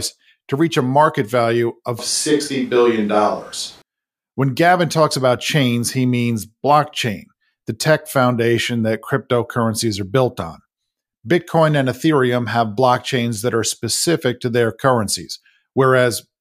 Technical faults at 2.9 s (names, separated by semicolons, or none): switch to a distant microphone